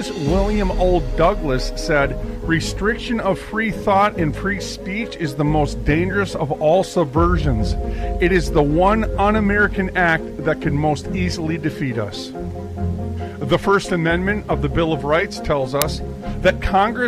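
At 15.82 s there's an uninitialised buffer: leftover memory got played as audio, giving a roughly 3 ms loud digital burst, which fits a 128-sample block.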